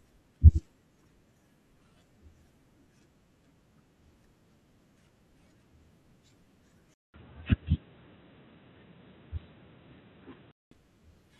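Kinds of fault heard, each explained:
Input switched to a poorer device: from 6.94 s to 10.71 s the sound turns dull and boxy, with nothing above 3.9 kHz, a 200 ms silence at the switch, a few decibels of level change and a faint new noise floor, likely from the recording input changing to a narrower-band device.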